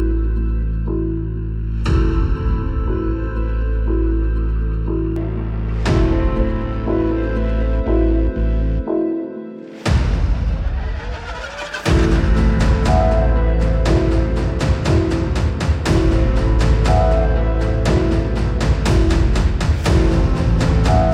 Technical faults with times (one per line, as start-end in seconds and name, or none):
0.00-5.16 channel delay (comb filtering)